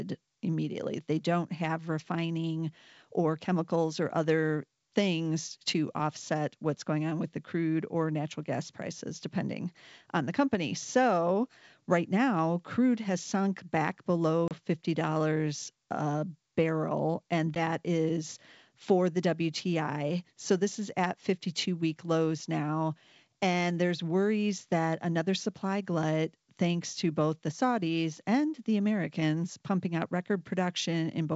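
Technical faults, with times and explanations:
14.48 to 14.52 s and 17.55 to 17.58 s, packet loss on an ADPCM call: after "crude has sunk back" about 30 ms of audio, a few packets' worth, drops to hard-edged silence, and between "a barrel and" and "is for the" a single packet of about 10 ms goes the same way. Because the G.722 decoder's adaptive predictor and step size lose track of the sender's state during each gap, the sound resumes with brief distortion before re-converging.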